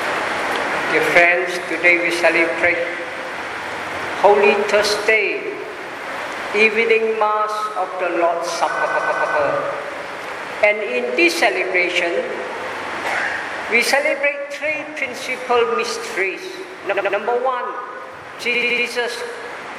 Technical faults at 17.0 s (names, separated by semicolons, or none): repeated frames